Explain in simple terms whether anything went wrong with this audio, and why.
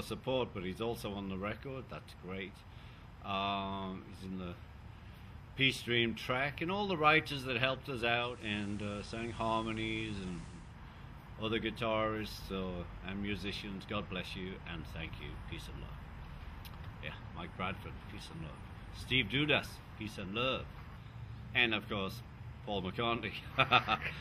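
Something did go wrong, from 8.15 to 10.78 s: a digital radio blending to analogue. The receiver lost its digital signal and faded across to the FM version over about a third of a second, so faint hiss appears and the level shifts slightly.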